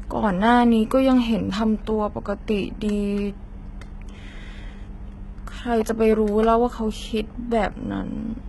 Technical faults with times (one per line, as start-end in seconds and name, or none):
0.00-8.48 HE-AAC compression